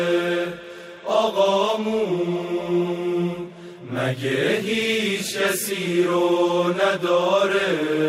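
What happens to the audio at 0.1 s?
Nothing goes wrong at 0.1 s; the audio plays through that moment intact, with no dropout, click or distortion.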